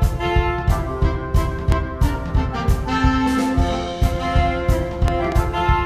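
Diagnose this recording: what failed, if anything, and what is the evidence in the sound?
A transient voltage disturbance, likely in the analogue wiring from a loose plug, a switch contact or a static discharge, was added to the signal path. It is heard as a loud pop: one sharp burst from 1.72 to 1.74 s, then two pops in quick succession between 5.08 and 5.34 s, each peaking roughly 15 dB above the sound, which carries on underneath. The circuitry after the fault shapes each pulse into a brief thump.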